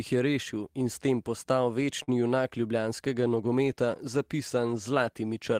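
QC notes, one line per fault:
2.03–2.10 s, short stall from a late packet: a sound is held about 41 ms too long with a slight buzz or dip, then speech resumes exactly where it stopped. The jitter buffer ran dry and was bridged until the packet arrived. Unlike packet-loss concealment, nothing is skipped; everything after runs 41 ms later.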